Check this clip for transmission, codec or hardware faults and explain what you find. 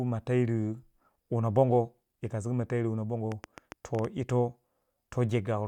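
A single fault shows up: a train of clicks from 3.32 to 4.31 s, over speech. Around seven sharp, near-identical pulses arrive at an uneven pace averaging about 7.2 per second, each standing a few decibels above the speech, so they tick audibly through the sound and any gaps alike. The likely cause is interference from nearby equipment or a faulty connection injecting pulses. Their matching shape and repetition set them apart from random crackle or a lone dropout pop.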